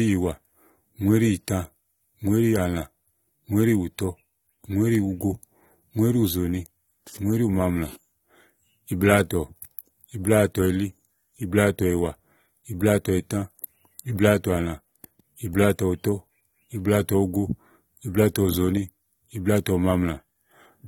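Speech runs through the whole clip with plainly audible AAC compression artefacts, likely from AAC-LC coding at a low bitrate, around 32 kbps. Coarse quantisation of each frame's spectrum smears the sound and adds a warbling texture, though content extends to about 19.3 kHz.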